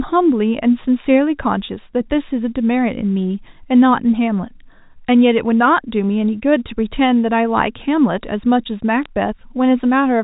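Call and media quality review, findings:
Sharp ticks and brief crackle, 9.03 to 9.06 s, near end of clip. Probable component: digital phone line carrying G.711 mu-law at 64 kbps. Mechanism: bit errors. Flipped bits alter single companded samples; sign or high-bit hits become clicks. Burst fits a couple of corrupted frames, error rate roughly a few tenths of a percent. Surrounding audio unchanged, band-limited below 4 kHz by the telephone coding.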